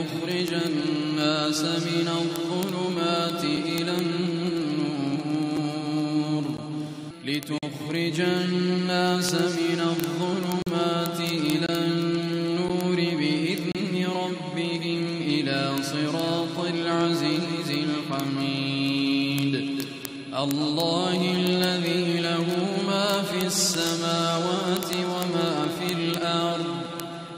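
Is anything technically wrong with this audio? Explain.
Yes, two faults are audible.

Word clock ticks run from 0.11 s to the end: sharp single-sample ticks about every 20 ms, roughly fifteen hundred in all. A receiver free-running against the sender's clock, off by about 0.1 percent, slips one sample at each crossing. Unlike the gaps, nothing goes silent.

A gap between stream segments appears at 3.57 s, 5.57 s, 6.57 s, 7.58–7.63 s, 10.62–10.67 s, 11.66–11.69 s, 12.68 s and 13.72–13.75 s. These are hard-edged silent holes of about 5 to 45 ms, falling on one-second boundaries, which fits mismatched segment timestamps. They are brief dropouts rather than clicks.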